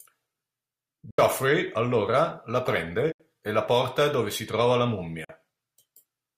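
The speech cuts to abrupt silence three times: at 1.10–1.19 s just before "allora la", at 3.12–3.20 s between "allora la" and "e la porta dove", and at 5.24–5.30 s after "dove si trova la". Each time it resumes as though it had played on. This is likely a Bluetooth dropout, where packets arrived too late and were discarded, losing about 73 ms, 73 ms and 44 ms respectively.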